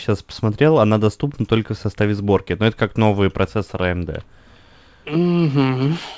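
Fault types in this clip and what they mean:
No faults can be heard.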